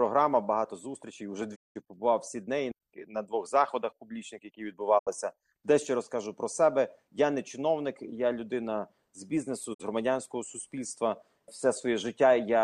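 Digital broadcast dropouts at 1.54–1.77, 4.97–5.09 and 9.73–9.81 s: the receiver lost valid frames and muted with 20 ms fades, leaving silent holes where programme is missing.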